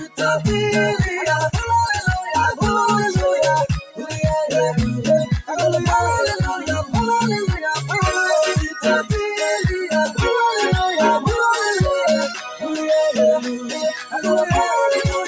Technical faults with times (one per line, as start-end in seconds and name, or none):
0.00-15.28 noise suppressor applied to music or sounds
0.00-0.20 sound cut by the noise suppressor
3.81-4.12 sound cut by the noise suppressor
12.34-12.64 sound cut by the noise suppressor
13.62-14.19 sound cut by the noise suppressor